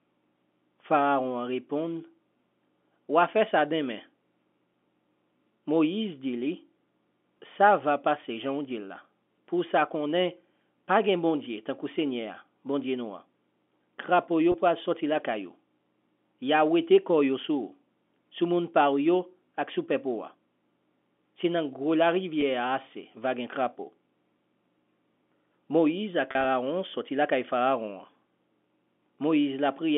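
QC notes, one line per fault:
14.52–14.54 s, 22.41 s, 26.31–26.45 s: packet loss with pitch repetition. The receiver repeats the last pitch period across each gap, so the sound briefly holds with a buzzy tone. The 20 ms gap falls just before "pou al soti lakayou". The 10 ms gap sits between "grou la" and "a ase vagen". At 26.31 s, 60 ms is lost in bursts over 140 ms, with a longest run of 40 ms.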